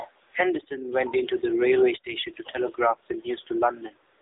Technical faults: AMR narrowband mobile codec

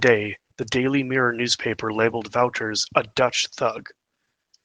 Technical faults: Opus voice compression

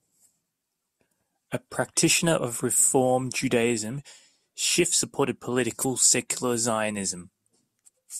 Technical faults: none

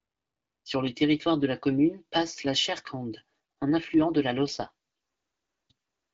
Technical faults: AMR rate drop

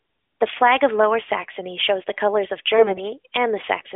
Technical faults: AMR bit errors

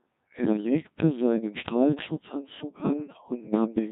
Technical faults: Codec 2 vocoder; bit errors on digital voice radio

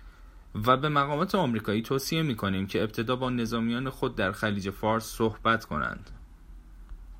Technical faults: none

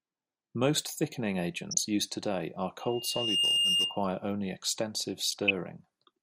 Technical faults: MP2 compression; DAB burbling; loudspeaker feedback squeal

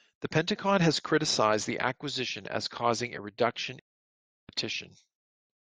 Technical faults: stream reconnect

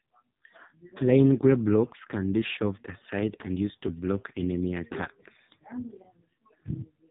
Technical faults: AMR narrowband mobile codec

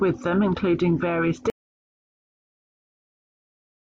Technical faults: audio dropout to silence

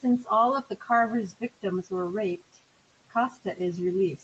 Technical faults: speech cut by the noise suppressor

